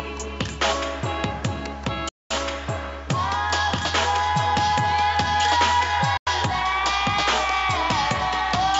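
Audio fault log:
2.09–2.34 s and 6.17–6.30 s, Bluetooth dropout: the output cuts to silence for about 250 ms and then about 130 ms, likely because packets failed to reach the headphones in time and were discarded. What marks it apart from a stall or buffer underrun is that the sound resumes further along, as if it had kept playing through the hole, so material is skipped rather than delayed.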